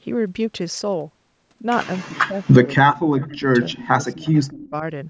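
Speech that keeps sinking during 2.02–2.51 s, 3.00–3.47 s, 3.67–3.89 s and 4.11–4.83 s, by roughly 20 to 40 dB, is speech suppressed in double talk, likely an echo canceller ducking the talker while the far side also speaks. The level dips in sections. Faint echo leak at 3.21–3.26 s, 4.26–4.47 s and 4.64–4.70 s is a copy delayed 231 ms and roughly 25 to 30 dB down, distinct from room reverb by its fixed lag.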